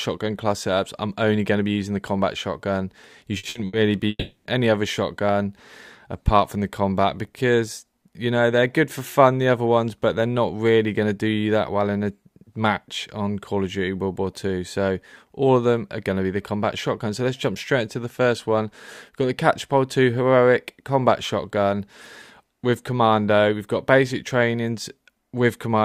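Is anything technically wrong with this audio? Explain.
Yes. Between 3.37 and 3.76 s there are three brief stutters, at 3.37 to 3.46 s, 3.49 to 3.58 s and 3.67 to 3.76 s. In each, the sound freezes into a fading held buzz or hiss and then jumps ahead. This is a burst of packet loss: the receiver stretched the last good audio over a gap of about 60 ms, and that stretch of the signal never plays.

From 4.09 to 4.48 s the audio smears into a fading buzz or hiss, then 140 ms of silence, before it resumes further along. The likely cause is a long network dropout: nothing arrived for about 0.4 s, concealment faded out, and that part was lost.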